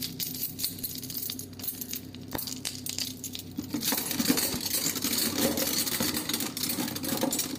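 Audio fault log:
4.54 to 4.56 s, loud pop. A single sharp pop sits on top of the sound, which continues beneath it. The pop peaks roughly 10 dB above the surrounding level. It is likely a sudden voltage pulse, as from a switch, static or a driver glitch, added to the signal.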